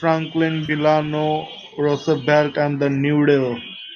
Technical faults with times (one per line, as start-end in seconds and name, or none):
0.66-0.71 AAC frame loss with concealment